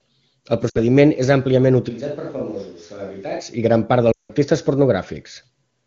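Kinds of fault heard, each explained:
Lost AMR speech frames: Radio errors wiped out stretches of coded speech, and the decoder smeared the last good frame while fading it. Just before "és àmpliament" (0.69–0.79 s), about 60 ms drops to near silence within two frames. After "i gran part" (4.12–4.31 s), about 180 ms drops to near silence within two frames and comes back rough.
Switch to a distant microphone: From 1.91 to 3.39 s, between "és àmpliament" and "i gran part", the speech suddenly turns roomy and hollow and loses bass. It drops roughly 10 dB, and room noise sits about 30 dB under it. The likely cause is the close mic dropping out.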